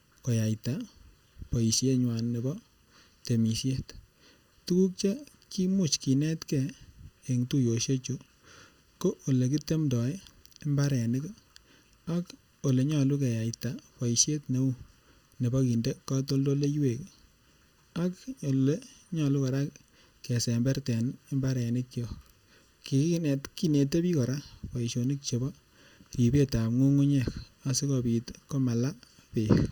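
Channel delay (comb filtering) runs through the entire speech clip. One channel arrives less than a millisecond behind the other, and when the pair is folded to mono the shared content cancels at regularly spaced frequencies. The first deep notch sits around 700 Hz, with further notches at odd multiples above it, near 2.1 kHz, 3.5 kHz and so on. The result is a steady hollow, phasey coloration, with the voice sounding thin and slightly tubular from start to finish.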